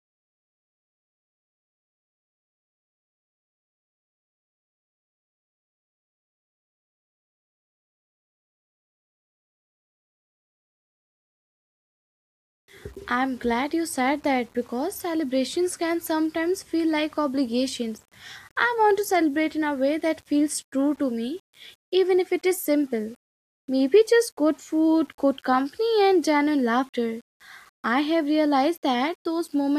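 Throughout, grainy distortion tracks the speech, likely low bit depth without dither near 8 bits. The waveform shows stair-steps, and the spectrogram's noise rises and falls with each syllable.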